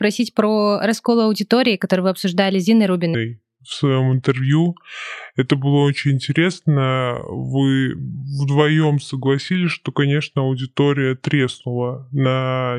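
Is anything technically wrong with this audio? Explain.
Yes. From 3.14 s to the end of the clip, a section at the wrong speed: just before "несколько частей больше наверное" the speech drops to 0.713 times its recorded speed, so it sounds slow, heavy and about five semitones lower. The likely cause is playback or an edit running on the wrong clock, which slows timing and pitch together. On a spectrogram, harmonics and formants shift downward and sit closer together; the waveform shows stretched syllables.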